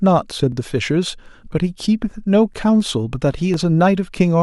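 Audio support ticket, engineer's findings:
Overlapping chunks: regular stutter/click in the speech at 0.52, 1.53, 2.54 and 3.54 s, roughly once a second. Looks like the chunking stage, with 1.0 s blocks where each new block starts about 6.5 ms before the previous one ended, so that sliver plays twice at every join. The joins creep later by that 6.5 ms each time, which fits. Worth checking the block offset math in the chunker or reassembly.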